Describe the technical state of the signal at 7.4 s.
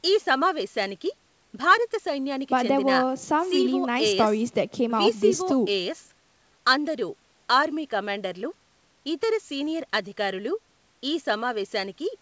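At 7.4 s the speech is intact, with no dropout, glitch or distortion, only the normal call-path band limit that leaves nothing above 8 kHz.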